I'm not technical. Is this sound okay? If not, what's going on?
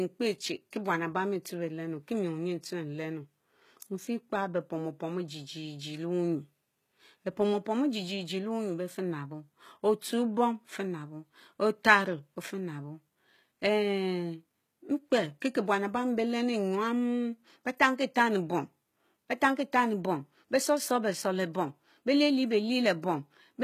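No. HE-AAC compression throughout: the treble sounds rebuilt rather than real, likely from this low-bitrate codec, so s sounds come out gritty and lispy.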